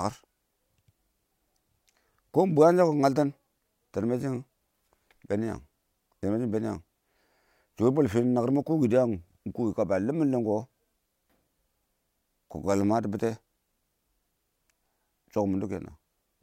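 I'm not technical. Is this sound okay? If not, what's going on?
Yes, this speech recording sounds fine. Nothing in it stands out as a technical problem.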